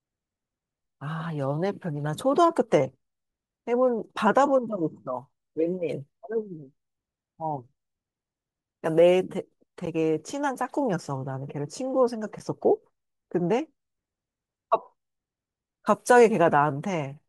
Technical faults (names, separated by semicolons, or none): block of digital silence